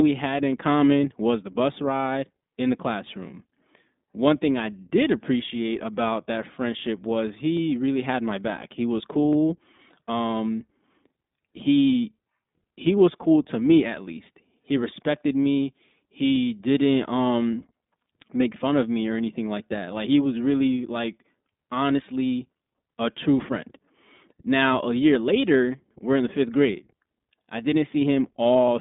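From start to finish the speech runs through the iLBC codec. Everything sits in a phone band of roughly 200 Hz to 3.7 kHz, with nothing above 3.8 kHz, and each 20 ms frame is coded on its own, giving a plainly rough, slightly synthetic edge, which fits the 15.2 kbps mode.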